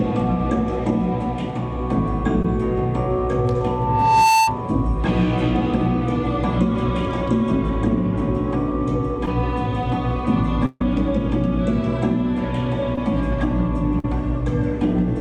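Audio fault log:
2.42–2.45 s, 9.26–9.28 s, 12.95–12.98 s: short concealed packet loss. A few tens of milliseconds of packets arrived too late, so the receiver extended the previous sound, leaving a brief smear or wobble.
3.60–4.62 s: loudspeaker feedback squeal. The microphone re-amplifies its own loudspeaker until an 890 Hz tone swells over roughly 0.7 s, ending a little louder than the signal.
4.40–4.48 s, 10.66–10.81 s, 13.99–14.05 s: burst of packet loss. About 70, 140 and 40 ms went missing. The decoder held and faded the last sound, with about 10 ms of silence in the second gap, before the audio resumes further on.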